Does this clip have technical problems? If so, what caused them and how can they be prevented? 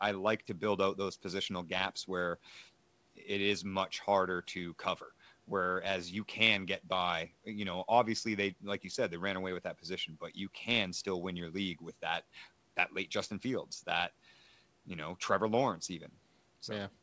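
No, there are no technical problems in this clip. The speech has passed through call microphone processing and G.722 wideband telephone coding, so it reaches up to about 8 kHz with nothing above, as expected for a wideband call.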